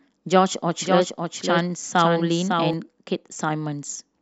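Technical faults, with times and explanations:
0.81–2.73 s, doubled audio track: a second, full-band copy of the speech trails by about half a second at roughly 5 dB lower, likely from a second, slower capture path. Unlike an echo or reverb, it doesn't decay or add room colour, and it starts and stops abruptly.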